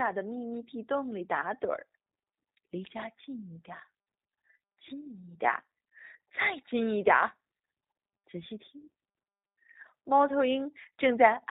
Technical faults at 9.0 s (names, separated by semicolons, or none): G.729 codec